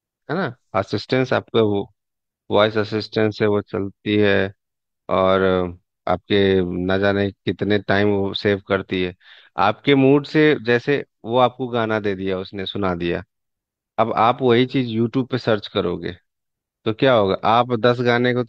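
No technical faults can be heard anywhere in this speech recording.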